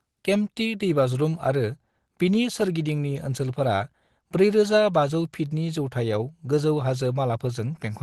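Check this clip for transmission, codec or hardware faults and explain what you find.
Nothing turned up here: the speech comes across steady and intact throughout, with no transmission, codec or hardware trouble to point to.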